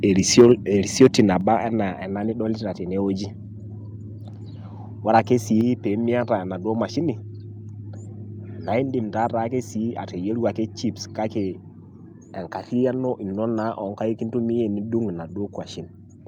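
From 0.37 to 0.52 s the loudest syllables turn harsh and crackly, and again from 1.01 to 1.21 s. This is microphone overload: the input was likely set too high, driving peaks about 4 to 5 dB past the converter's limit and flattening a small share of samples. Sudden drops in overall level come at 0.41 s (about 3 dB), 1.41 s (about 4 dB) and 5.61 s (about 4 dB), just before "peyie miata enaduo mashini". Voice and background fall together, which points to the microphone volume being stepped down, likely by call software reacting to the microphone being too loud or clipping.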